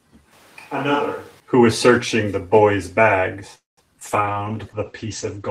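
From 0.33 to 1.40 s the speech suddenly turns roomy and hollow, thinner in the bass, about 10 dB quieter and with room noise rising to roughly 25 dB below the speech. This is likely a switch to a distant microphone after the close one dropped out, and it snaps back just as abruptly.

At 3.55 s the sound stalls. The last moment is stretched into a fading buzz, then there is about 160 ms of silence before the speech carries on at 3.79 s with nothing skipped. That is a call audio freeze, likely from packets held up long enough to empty the jitter buffer. It inserts a 220 ms gap.

Brief smears at 3.93–3.96 s and 4.00–4.03 s are short concealed packet loss. About 40 ms and then 20 ms of audio never arrived, and the decoder papered over each hole by extending the preceding sound before blending back.

From 4.04 s to the end the speech turns rough and muffled, with nothing above 8 kHz. This is a call bitrate drop: the encoder was throttled, and the sound fits a fall from around 32 to 12 kbps.

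From 4.33 to 4.53 s the speech drags at about 85% speed without any change in pitch, adding 39 ms. That is a jitter buffer slow-down, in which repeated pitch periods rebuild the receiver's reserve.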